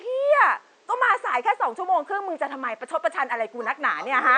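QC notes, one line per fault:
No faults found; the only background is room noise sitting about 37 dB below the speech, part of the original recording.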